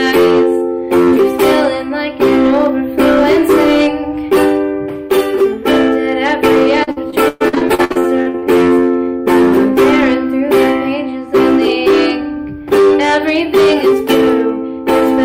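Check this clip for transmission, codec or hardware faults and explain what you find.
Two faults are present: hard clipping across the whole clip, and a burst of repeated packet loss in the middle.

Hard clipping runs throughout. The signal is driven about 10 dB beyond what a stage can pass, so roughly a tenth of the samples hit the ceiling and are sliced flat. Loud passages take on a harsh, crackling fuzz. The waveform shows squared-off peaks, and the spectrogram shows harmonic smear reaching high frequencies.

Repeated packet loss (robotic sound) occurs from 6.83 to 8.44 s. There are about fifteen dropouts, the longest near 121 ms, and concealment is stretched over roughly 38% of that span by repeating the preceding sound. The audio turns choppy, with pieces missing. A spectrogram shows stuttering, smeared blocks and frozen-looking spectral bands.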